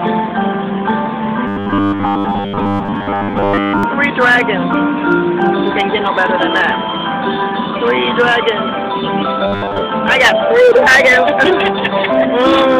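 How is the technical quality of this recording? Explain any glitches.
Two stretches of robotic sound from repeated short buffers, from 1.47 to 3.83 s and from 9.47 to 9.81 s. New audio likely arrives too seldom, so a 10 ms slice is replayed while most of the real signal is skipped, imposing a rigid, metallic 100 Hz buzz.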